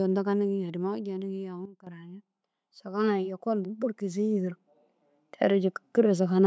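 Automatic gain falling runs from 0.05 to 1.54 s: the level control judged the incoming speech too loud or its background noise too strong and wound its gain down by about 8 dB over roughly a second and a half. The speech starts out hot and then sinks steadily, with the room noise behind it dropping in step, because the whole signal is being scaled rather than the voice alone.

A sudden gain jump follows at 1.65 s, where the level falls by about 12 dB in a single step instead of easing down, and it recovers at 1.87 s, about 0.21 s later. Voice and background drop and return together with hard edges, the signature of a likely gain setting or bit shift applied without any ramp, so the change lands between two adjacent samples.

Automatic gain rising then appears twice. From 2.82 to 4.59 s the control decides the input has become too quiet and raises its gain by about 8 dB across nearly two seconds, so the speech and its background swell upward together. 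From 5.15 to 6.42 s it climbs again, this time by about 4 dB, giving a gentler lift in overall level and noise floor. Through all of this the call-style microphone processing shows in its band limit, with nothing above 8 kHz.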